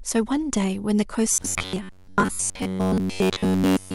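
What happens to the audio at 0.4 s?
Nothing goes wrong at 0.4 s; the speech plays through that moment intact, with no dropout, click, distortion or other fault.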